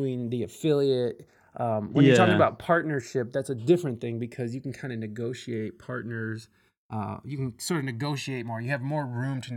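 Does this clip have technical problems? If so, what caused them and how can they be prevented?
Yes. The channels drift apart throughout, from separate clocks differing by roughly 200 ppm. The delay reaches about 1.5 ms, giving slow flanging in mono. Lock both devices to one shared word clock.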